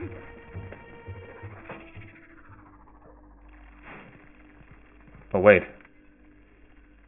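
Aliasing runs throughout: content above 3 kHz folds back downward as harsh, unrelated tones, consistent with an unfiltered drop to a 6 kHz rate. Unlike a clean low-pass, highs turn gritty rather than dull.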